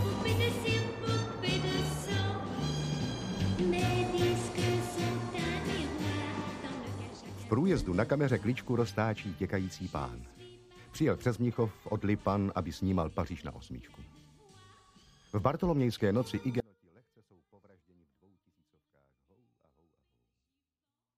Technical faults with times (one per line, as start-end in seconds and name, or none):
16.60-21.18 audio dropout to a faint residue